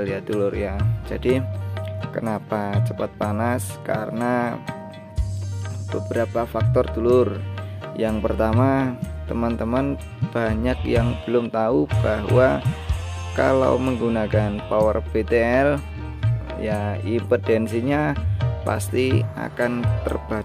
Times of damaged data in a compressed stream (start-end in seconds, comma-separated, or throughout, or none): none